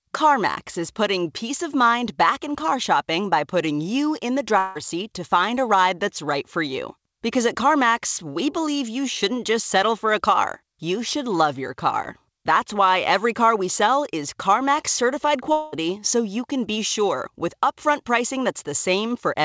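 At 4.58 to 4.78 s and again at 15.52 to 15.75 s the speech breaks off and is replaced by a smeared buzz continuing the last sound, about 0.17 s and 0.2 s long. It has no silent stretch before the speech resumes with roughly 0.18 s and 0.21 s lost. This is likely a long network dropout. On a spectrogram each gap shows flat, repeated bands fading out. The waveform loses its syllable shape. Throughout, nothing sits above 8 kHz, which fits the G.722 call codec.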